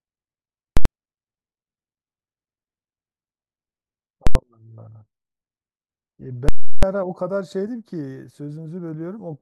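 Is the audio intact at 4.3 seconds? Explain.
No. From 4.27 to 4.35 s the speech is replaced by a violent pop at each edge, about 85 ms apart, with nothing audible between them. This is invalid numbers at full scale: a calculation produced infinite or invalid values that were forced to the largest possible sample value, so the output is pinned at one extreme value, far beyond the speech peaks, for the whole block. The steady level is silent, and only the jumps onto and off it are heard. The span fits a 4096-sample processing block.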